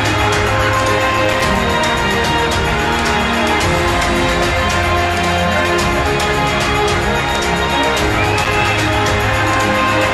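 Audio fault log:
1.12–1.59 s and 8.32–8.61 s, processor overload crackle: a dense run of tiny silent gaps, each a few milliseconds long, which fits buffers of about 3 ms, with hard edges that form a gritty crackle. Unlike a single dropout, it is a rapid cluster that stops abruptly.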